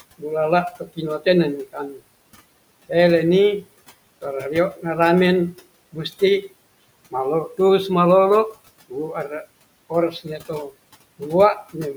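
Quiet parts of the speech sound swallowed and faint at 0.71–1.26 s, 1.65–2.0 s, 5.93–6.43 s and 9.9–10.7 s, dipping by about 12–13 dB for roughly 100–150 ms each time. This is speech cut by the noise suppressor: it mistook those soft stretches for the room noise, which sits about 21 dB below the speech, and turned them down with it.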